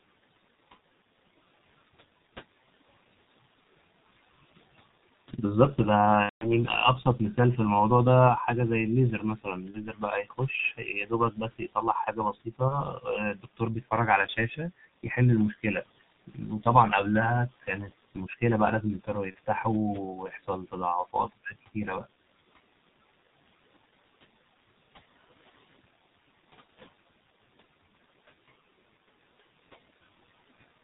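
Throughout, the speech is muffled and hoarse, with nothing above 4 kHz. This is heavy G.723.1 codec damage, consistent with a rate near 6 kbit/s.

From 6.23 to 6.51 s, VoIP packet loss concealed by the speech codec stretches the sound out, and it fades and then mutes. The length suggests about six lost 30 ms frames.

Between 9.19 and 10.41 s, the noise suppressor cuts speech, dropping it by up to about 18 dB. Inside that span, at 9.71 to 9.86 s, another short concealed loss appears.

From 10.77 to 13.92 s, suppression swallows roughly a second of speech in total. A brief concealed loss sits at 12.68 to 12.81 s.

Shorter suppressor cuts of about 13 to 15 dB follow at 16.27 to 16.66, 17.49 to 18.42 and 19.04 to 19.65 s. Parts of the speech there sound faint.

A last concealed loss falls at 19.31 to 19.35 s.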